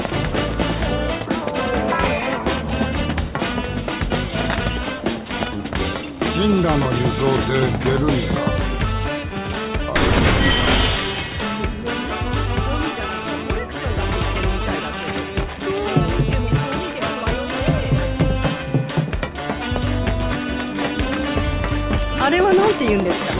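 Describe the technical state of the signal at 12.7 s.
At 12.7 s the signal is intact, with no audible fault at that moment.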